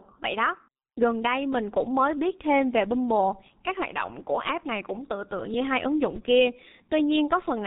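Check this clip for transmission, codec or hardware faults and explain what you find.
One codec fault runs through the whole clip. Throughout, the speech carries heavy G.723.1 codec damage. The coder works in 30 ms frames, updates its voice model slowly, and keeps nothing above 3.8 kHz, which fits a 6.3 kbit/s stream. The result is muffled, hoarse speech with smeared consonants.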